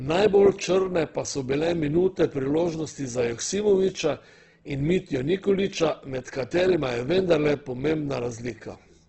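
From start to finish, the speech has a hard ceiling near 8.1 kHz, with nothing above it. Heavy damage from Opus compression is the likely cause. The encoder is running in its music-style CELT mode at a very low rate, which fits roughly 12 kbps. Starved of bits, it fills bands with folded or noisy energy. So the speech sounds rough and grainy rather than swirly. The narrowed, wideband-only range makes it dull.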